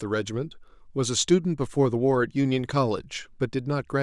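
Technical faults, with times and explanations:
No technical faults can be heard in the speech.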